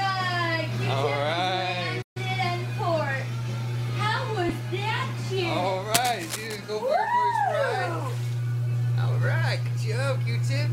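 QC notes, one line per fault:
2.02–2.17 s, playback stall: the audio drops out for 136 ms, likely because the player ran out of data or its thread was blocked, before sound returns.
4.49 s, lost LE Audio frames: a brief noisy smear, consistent with one dropped 7.5 ms LC3 frame that the decoder concealed by repeating the previous spectrum with randomised signs.
5.94–6.56 s, cable scratch noise: dense, uneven scratching bursts sit only a little below the signal, likely from a worn cable, connector or control whose contact resistance fluctuated while it was moved.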